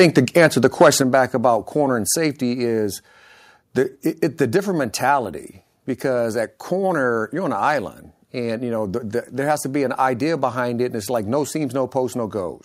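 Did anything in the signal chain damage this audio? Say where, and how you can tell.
Yes, two problems, both early on. From the start to 0.89 s, just before "back about corner", the loudest peaks are getting their tops sheared off. You hear a harsh, crackly edge on the strongest syllables, with peaks pushing about 4 dB past full scale and somewhere around one or two percent of samples flattened. That's microphone overload at the converter stage, most likely an input volume set too hot for the capsule's output.

Right after that, the call processing reacts. At 1.02 s the whole level, speech and background together, drops in a single step of about 5 dB. At 2.04 s, after "back about corner" and leading into "safety is", there's another, smaller drop of about 2 dB. This is microphone volume stepped down, likely the software's automatic gain control spotting the clipping and cutting the device's input volume in discrete steps rather than ramping it smoothly.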